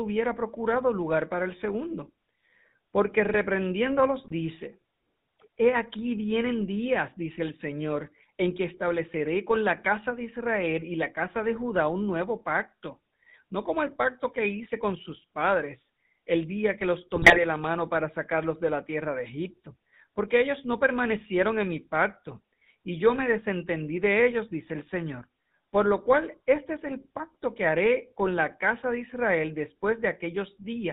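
GSM full-rate codec coding, throughout: speech is rebuilt from a vocal-tract model driven by sparse pulses and cut off above 4 kHz, giving a plainly audible buzzy, gravelly roughness. GSM bit errors, 4.18 to 4.33 s and again 17.15 to 17.44 s between "el día que los" and "la mano para sacarlos": corrupted filter, pitch and gain values distort frames into squawks, pops and gargling.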